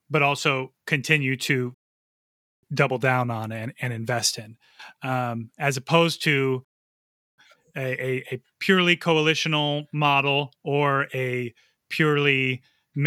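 At 1.74 s, after "but also continue to", a rebuffering stall drops the speech into silence until 2.63 s, then resumes at "double down on and" with nothing skipped. A second stall follows "um as opposed to" from 6.65 to 7.38 s. Each time the player exhausted its downloaded audio and waited, adding 0.89 s and 0.73 s.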